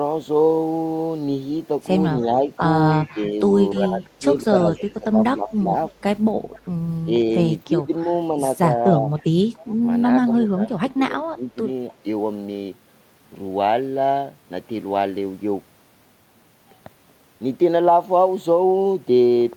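From 2.36 to 6.04 s the speech dips in level, by about 15 dB at the deepest point, and in patches it thins out or breaks up, adding up to around a second and a half of affected sound. This is speech suppressed in double talk. The likely cause is an echo canceller hearing both sides at once, failing to tell local speech from loudspeaker echo, and attenuating everything.

Within that stretch, from 3.05 to 3.3 s, a faint delayed copy of the speech appears, trailing the original by 288 ms and sitting about 25 dB below it. This is echo leak, likely from a far end on loudspeaker whose canceller let some of its microphone pickup through and sent it back. A second short scrap of the same echo sounds at 6.54 to 6.65 s.

From 7.05 to 12.05 s the double-talk suppression returns. Again the speech drops by up to about 15 dB and loses pieces, for roughly a second and a half in total. Inside it, from 9.18 to 9.7 s, the echo leak recurs with the same 288 ms delay and about −25 dB level, heard as a quiet repeat.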